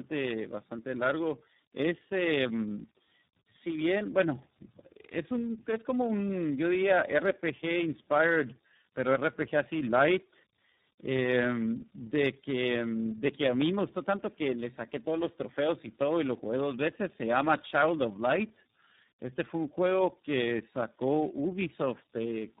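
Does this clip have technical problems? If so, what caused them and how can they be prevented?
Yes. Tandem speech coding runs throughout. The speech sounds rough, muffled and warbly, with nothing above 3.8 kHz, which fits three low-rate speech coders in series, each re-encoding the previous one's damage. A single codec would sound cleaner. Prevention: keep the call in one codec end to end, or pass it through transcoding-free.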